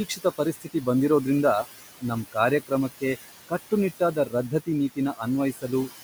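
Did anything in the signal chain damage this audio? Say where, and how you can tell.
Yes, the call-processing stage did it. Noise suppressor artifacts run through the whole clip: the room noise, sitting about 14 dB under the speech, gets pushed down by about 15 dB in the gaps and swells back under the talking.

There's also speech cut by the noise suppressor, where the same processor mistook quiet speech for noise. From 0.09 to 0.87 s, just before "ಬಂದಿರೋದ್ರಿಂದ ನಮ್ ಕಾರ್ಯಕ್ರಮಕ್ಕೆ", about 300 ms of soft bits drop by up to about 15 dB. Shorter swallowed moments follow at 4.0 to 4.33 s (about 11 dB) and 5.53 to 5.69 s (about 14 dB).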